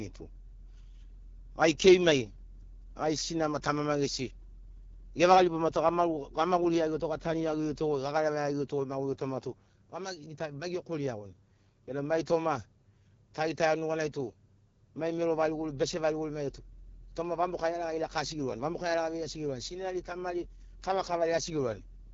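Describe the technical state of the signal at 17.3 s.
At 17.3 s the speech carries the AMR wideband (HD Voice) codec damage that runs through the whole clip. The codec models the voice as pulses driving a vocal tract filter up to 6.4 kHz and fills the band just above with shaped noise, so nothing is present above about 7.2 kHz. The coding damage is plainly audible as a rough, raspy texture, which points to one of the lowest rates, around 8.85 kbit/s.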